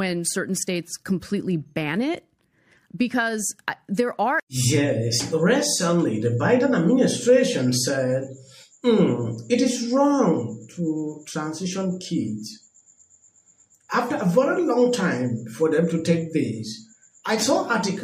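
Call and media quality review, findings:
No call or media quality findings to raise for this clip.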